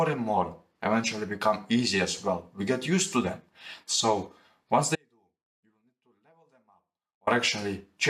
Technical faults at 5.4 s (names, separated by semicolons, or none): audio dropout to a faint residue